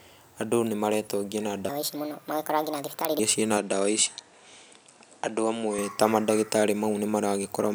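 From 1.69 to 3.19 s the speech runs at the wrong speed, about 1.47 times too fast, ending just before "cirĩ na". Because speed and pitch move together, the voice jumps up by roughly seven semitones and sounds hurried and thin, then drops back to normal. The likely cause is that this section was played or resampled against the wrong clock, so its samples were read out faster than they were captured.

From 3.57 to 5.79 s, beginning just after "cirĩ na", the input switches to a poorer device, likely a different microphone or a headset's call profile taking over mid-recording. The change comes with no gap and no jump in level, but the band narrows, so the speech sounds duller and boxy. A new noise floor also appears about 45 dB below the signal, and the sound clears again when the original input returns.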